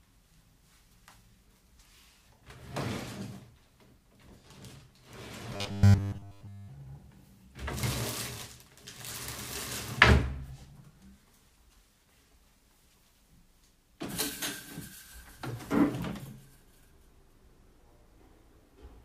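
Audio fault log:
5.54–6.68 s, robotic sound from repeated short buffers: The sound turns into a rigid, metallic buzz pitched at 100 Hz. It likely comes from a 10 ms buffer replayed while new audio ran late. Most of the real audio there is skipped.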